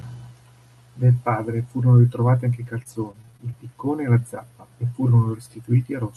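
Speech, carried over an Opus call path whose band stops near 12 kHz, with repeated packet loss (robotic sound) from 2.61 to 3.54 s, between "furono ritrovati anche i" and "piccone e la zappa". About seven short holes, the longest 23 ms, are patched by stretching the preceding sound, so roughly a fifth of a second is rebuilt and turns choppy. On a spectrogram, brief smeared, over-regular harmonic strips interrupt the speech, and the waveform shows small flattened, repeating segments.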